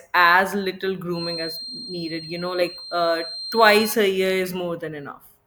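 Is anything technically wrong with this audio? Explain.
Yes. From 1.09 s to 4.00 s, after "as little" and before "a year", a feedback whistle appears. The loudspeaker-to-microphone loop is likely sitting right at the edge of feedback, so a single 4.2 kHz tone rings on without growing. It sounds like a thin, steady whistle roughly 15 dB beneath the speech, swelling and fading slowly in level.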